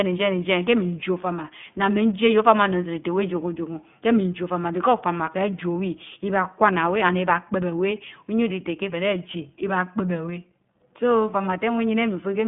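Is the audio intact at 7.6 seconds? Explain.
No. At 7.6 seconds, as throughout the clip, the speech carries iLBC codec damage. The codec codes each short frame's excitation independently, consistent with 20 ms frames at its 15.2 kbps mode, which leaves a plainly rough, slightly synthetic texture. The band is squeezed to roughly 150 Hz to 3.5 kHz. On a spectrogram, energy stops at a hard ceiling near 3.7 kHz with nothing above, and the lowest band is thin.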